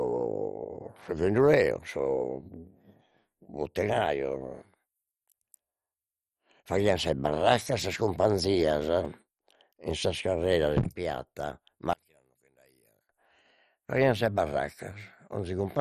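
From the start the speech sounds dull and gurgly, with nothing above 13.9 kHz, which points to MP2 compression, likely at something like 56 kbps. From 11.93 to 13.09 s the level drops by about 34 dB and only a faint copy of the sound remains, likely because one channel was inverted and the centre cancelled in mono.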